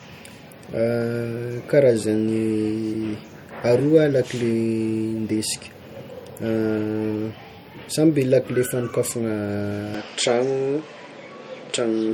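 MP3 compression, throughout: plainly audible watery, swirling artefacts and nothing above 18.7 kHz, likely from encoding at a low bitrate, around 48 kbps, that starves weak frequency lines.

Input switched to a poorer device, from 9.94 s to the end: with no gap, the top drops to 8.8 kHz, the level shifts by roughly 5 dB and new noise appears, likely from a different microphone.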